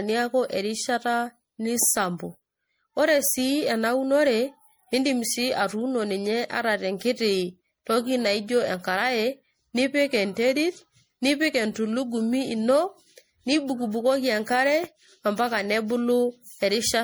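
Throughout the clip, the speech has likely been through generation loss: repeated lossy decoding and re-encoding, consistent with MP3 at around 64 kbit/s applied about four times. Each pass requantises on a shifted frame grid, so the sound turns swirly, hollow and smeared, with softened consonant attacks.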